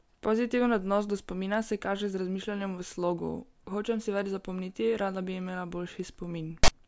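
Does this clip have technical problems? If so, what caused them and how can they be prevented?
Yes. The player decoded a block of text metadata as samples, so file tags played as audio produce a harsh, lopsided rasp with abrupt edges from 6.64 to 6.68 s. Parsing the container correctly and skipping tag chunks before decoding prevents this.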